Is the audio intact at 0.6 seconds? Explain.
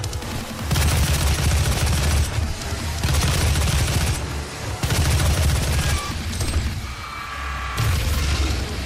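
Yes, the audio is intact at 0.6 seconds, with no dropout, click, distortion or other fault to be heard at that point.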